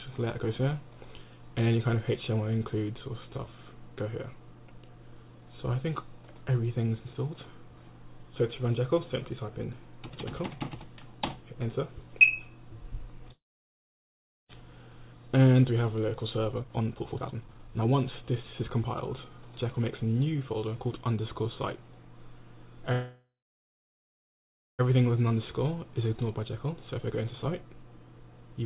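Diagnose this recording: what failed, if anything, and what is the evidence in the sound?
The fault lies in the network and jitter-buffer stage of a narrowband call path. Nothing reaches above 4 kHz, which fits a G.711 call codec. At 13.32 to 14.52 s and again at 22.92 to 24.82 s, the sound halts and the last fragment is stretched into a brief fading buzz or hiss. Then comes about 1.1 s and 1.48 s of silence. Both stalls are call audio freezes, likely caused by delayed packets draining the jitter buffer. These gaps differ from a dropout because playback resumes exactly where it stopped, with nothing missing. The pauses insert about 1.17 s and 1.87 s of extra delay.

The second kind of fault is jitter buffer speed-up, where the receiver works off that extra delay. From 16.59 to 20.94 s, the audio runs at 127% of its speed, shedding around a second in total. Shorter catch-ups follow at 24.95 to 25.31 s, at 112%, and at 26.27 to 28.63 s, at 109%, removing roughly a quarter of a second. 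Whole pitch periods are cut out, so the audio sounds hurried but keeps its pitch. That separates this fault from a sample-rate mismatch, which would raise the pitch along with the speed.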